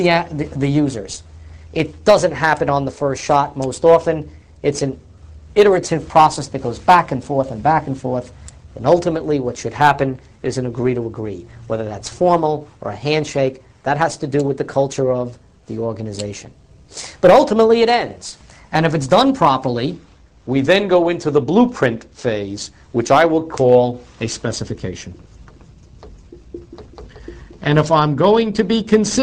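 A wrong sample rate runs from the start to 19.9 s: the audio plays about 1.09 times too fast and sits about 1.5 semitones sharp, with tempo and pitch shifted together. That joint shift means the samples are being clocked out faster than they were captured, with no rate conversion in between. The ratio fits material recorded at 44.1 kHz but played back at 48 kHz, which stretches nothing and simply compresses time and raises every frequency by the same factor.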